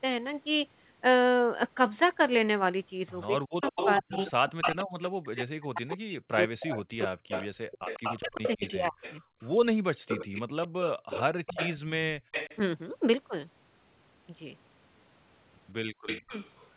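From 3.21 to 4.84 s a copy of the speech returns 148 ms late at about 5 dB below the talker, likely an echo leak from a far-end loudspeaker the echo canceller failed to clean up. The fixed 148 ms lag separates it from room reverberation, which smears rather than repeats.

Overlapping this, from 3.26 to 9.74 s, the talker's own speech dips and breaks up for about four seconds in total, sinking by up to around 40 dB. This is likely speech suppressed in double talk: with both sides active, the canceller turned down the near talker along with the echo. Unlike the leak, nothing is added; the speech itself goes missing.

A second echo leak runs from 5.89 to 12.59 s, again 148 ms behind, now about 10 dB down.

Short dropouts of the room sound come at 10.02–10.07 s (about 35 dB), 12.2–12.31 s (about 34 dB) and 15.87–15.93 s (about 16 dB). This is background gated by the echo canceller: it clamped the microphone while the loudspeaker played, and the ambience snaps back within about 100 ms.

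At the end, the echo leak returns from 16.06 to 16.69 s at 148 ms and about 10 dB down, and the speech is suppressed in double talk once more from 16.21 to 16.34 s, dropping by roughly 35 dB.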